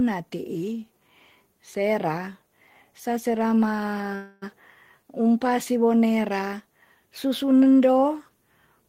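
At 4.15 s the speech stalls in a call audio freeze lasting until about 4.44 s. The last sound is stretched into a fading tone for roughly a quarter of a second, with no drop to silence. The likely cause is delayed packets draining the jitter buffer. Unlike a packet-loss dropout, the speech then resumes exactly where it stopped, so nothing is lost, but everything afterwards runs about 264 ms later.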